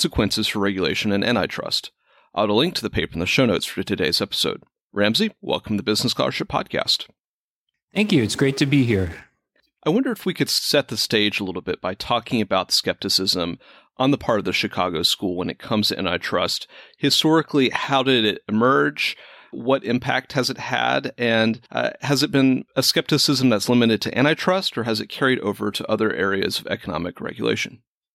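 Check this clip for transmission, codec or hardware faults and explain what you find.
No transmission, codec or hardware faults are audible anywhere in the speech.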